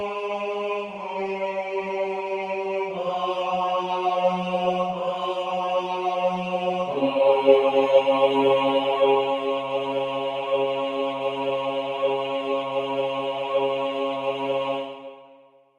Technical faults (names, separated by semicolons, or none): noise suppressor applied to music or sounds